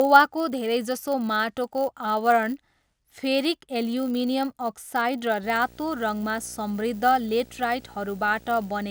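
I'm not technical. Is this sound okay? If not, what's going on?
No. Two separate problems can be heard in this speech clip.

The first runs the whole way through: a filter restarted on every block. A processing step forgets where it was and starts fresh on each short chunk of audio, so every chunk begins with a tiny click. These clicks come 100 times a second, which fits chunks about 10 ms long, and they blur into a rough buzz. It grows louder when the talking gets louder and fades in the pauses. Ordinary electrical hum would stay steady even when nobody speaks.

The second starts at 5.43 s and lasts to the end: video or display buzz. A screen or video cable is leaking into the audio, adding a buzz at 59.94 Hz, the rate at which the picture refreshes. Above it sits a gritty hash and a very high, thin whine at 15.7 kHz. It is fairly quiet. Unlike the first problem, it ignores the speech and carries on at the same level through the gaps.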